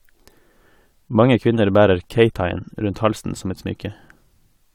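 A short speech recording, and nothing technically wrong turns up anywhere in it.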